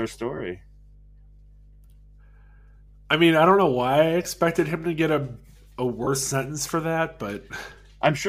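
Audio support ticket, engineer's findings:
Mains hum, throughout: steady 50 Hz low tone with low harmonics, roughly 25 dB below the speech. Ground loop or nearby transformer coupling. Constant level, unaffected by pauses, so not rumble or handling noise, which would shift with the source.

Lost LE Audio frames at 0.37–0.40 s, 4.23–4.25 s and 6.04–6.07 s: short noisy smears of 30, 20 and 30 ms, matching three, two and three 10 ms frames. Decoder concealment, likely the LC3 path, repeats the last spectrum with randomised phase, so the gaps are filled with hiss instead of silence or a click.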